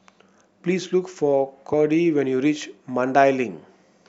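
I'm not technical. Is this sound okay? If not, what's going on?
No. At 1.72 s there is a brief glitch caused by damaged data in a compressed stream. A small piece of the stored file was corrupted, so the player misread that moment, lost its place, and produced a short glitch before picking up again.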